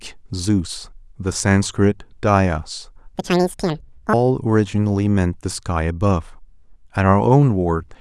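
A section at the wrong speed runs from 3.14 to 4.13 s, where the speech is played back at 1.94 times its recorded rate. Because speed and pitch are tied together here, the voice jumps up by close to ten semitones and rushes through that second, sounding thin and chipmunk-like before snapping back to its normal pace and register. The cause is likely a playback or editing step that ran this stretch against the wrong clock.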